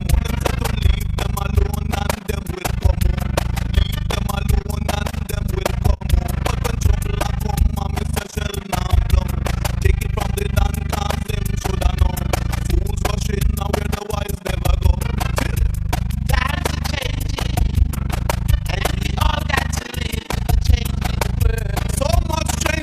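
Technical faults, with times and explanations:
Throughout, overlap-add ripple: frames were rejoined with uneven overlap gain, so the level dips about 60 dB around 30 times a second, a fast flutter.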